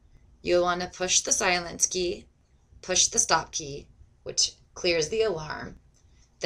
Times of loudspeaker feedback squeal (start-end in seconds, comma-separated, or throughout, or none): none